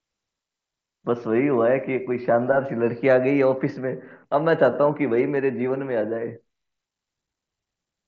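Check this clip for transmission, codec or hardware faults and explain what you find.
No faults found here.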